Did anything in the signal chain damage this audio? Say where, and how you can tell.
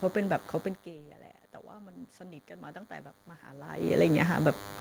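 Yes. A DECT cordless phone buzz runs through the whole clip at the analogue wiring stage: a thin, steady 100 Hz buzz rich in harmonics, roughly 20 dB below the speech. A nearby DECT handset or base pulses every 10 ms, and the audio circuitry rectifies those bursts into the signal.

The automatic gain rising happens twice in call processing, from 1.79 to 2.86 s and from 3.45 to 4.26 s. Each time the input drops by about 17 dB, and the AGC gradually adds about 4 dB, so the speech and the room noise swell together.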